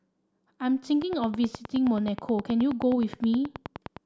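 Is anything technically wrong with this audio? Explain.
Yes. From 1.02 s to 3.98 s a train of clicks runs over the speech: around thirty similar pulses at a regular 9.5 per second, peaking roughly 10 dB above the signal. It sounds like steady ticking, likely from electrical interference or a faulty connection or power supply.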